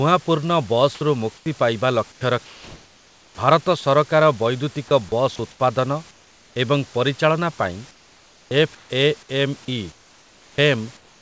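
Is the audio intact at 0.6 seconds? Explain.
Yes, the audio is intact at 0.6 seconds, with nothing there beyond the ordinary band-limited sound of the call path and the faint room noise beneath the speech.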